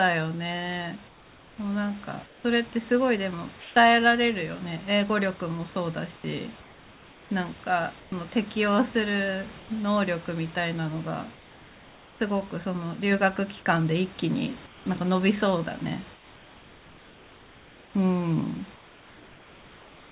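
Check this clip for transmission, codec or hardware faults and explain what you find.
The pauses in this speech show one recurring fault, heard against a call path whose sound stops at 4 kHz, consistent with G.711 mu-law.

Comfort noise in place of the background appears at 1.08–2.44, 3.6–3.76, 6.16–8.12, 9.6–9.7, 11.34–12.2, 14.66–14.86, 16.14–17.94 and 18.76 s to the end. The sender likely stopped transmitting during silence, and the receiver then synthesised noise in its place. That noise is a steady, featureless hiss, mostly about 3 dB quieter than the real room noise. On a spectrogram it shows as smooth, uniform texture, and on the waveform as a flat, even band.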